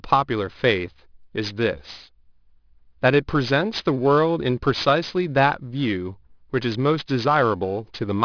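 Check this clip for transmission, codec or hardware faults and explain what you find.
One fault runs through the whole clip: aliasing. The speech was resampled down without an anti-aliasing filter, which points to a drop from 24 kHz to 11 kHz sampling, so energy above 5.5 kHz folds back below it, roughly 20 dB under the speech. Sibilants turn gritty and metallic and the spectrum runs hard up to the 5.5 kHz edge. Plain band-limiting would only sound dull; aliasing adds wrong, unrelated high tones.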